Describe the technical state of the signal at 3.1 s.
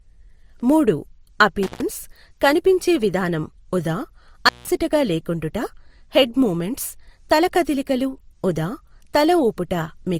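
At 3.1 s the speech carries the layered artefacts of transcoding between lossy codecs, present throughout the clip: an MP3-like smearing re-encoded with Opus-style graininess, likely a roughly 58 kbit/s MP3 passed through 32 kbit/s Opus. On a spectrogram, blurred, blocky time-frequency patches appear, with nothing above 20.2 kHz.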